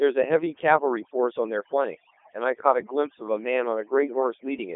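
Short speech recording with two problems running the whole way through. First, there's overdone noise removal: the denoiser was pushed so hard that bands near its noise estimate got gated out along with the quieter parts of the voice, so the background drops and breaks up into little twinkling specks. On top of that, it's been through a Codec 2 vocoder, and heavily damaged by it. The voice is rebuilt from pitch, voicing and a rough spectral envelope rather than the actual waveform, so it sounds robotic and buzzy, and the robotic quality fits the top 3.2 kbit/s mode. The band sits roughly between 250 Hz and 3.5 kHz, with nothing above 3.6 kHz.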